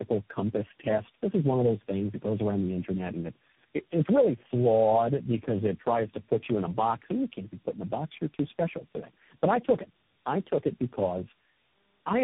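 Throughout, tandem speech coding passes the speech through four codecs in a row, each re-coding the last one's output, which fits a chain ending in CVSD. The speech sounds rough, muffled and warbly, with nothing above 3.7 kHz.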